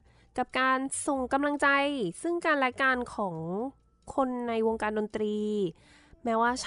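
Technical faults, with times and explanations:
No technical faults can be heard in this recording.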